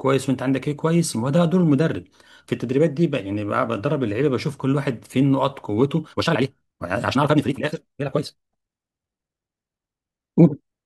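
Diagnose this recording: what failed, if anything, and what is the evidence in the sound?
A time-stretched section runs from 6.03 s to the end: the speech suddenly moves at twice its pace, sounding rushed, yet its pitch stays put. The likely cause is software squeezing the audio to fit a length by dropping short pieces. A wrong playback rate would raise the pitch too.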